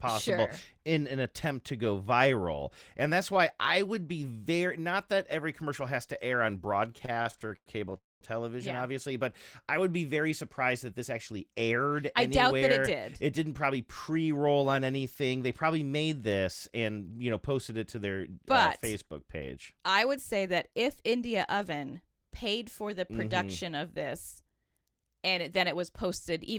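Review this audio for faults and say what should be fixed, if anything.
Repeated stalls (stutter) run from 6.91 to 7.94 s: ten short interruptions, the longest about 100 ms, fill roughly 280 ms, about 27% of that stretch. The jitter buffer kept running dry as packets arrived late, so the receiver stretched the last sound each time instead of dropping anything. The sound drags and stutters. A spectrogram shows repeated smeared, flat-topped segments where the harmonics hold steady, and the waveform shows the same cycle repeated, fading in the longer stalls. Prevention: give the jitter buffer enough depth to absorb this level of packet delay variation.

A call audio freeze follows immediately, from 7.97 to 8.24 s. The last sound is held as a brief buzz that dies away, then about 200 ms of silence, after which the audio resumes where it stopped. About 240 ms has been inserted and nothing lost, and the playout delay is that much longer afterwards. 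The likely cause is a burst of held-up packets emptying the buffer. The waveform shows a decaying tail into a flat gap, and the spectrogram shows a blank column. Prevention: fix the network path that delays packets in bursts.

Jitter buffer speed-up occurs at 10.91–12.03 s (107% speed, roughly 70 ms removed), 19.56–21.31 s (105%, about 100 ms), and 24.42 s to the end at 26.59 s (106%, about 150 ms). After the build-up in delay, the receiver shortened its backlog by cutting many pitch-period-length pieces, so the pitch stays the same while the pacing sounds hurried. On a spectrogram, syllables look compressed and the gaps between them are shortened, and the waveform has tiny splice points. Prevention: resolve the upstream delay so the buffer doesn't have to drain.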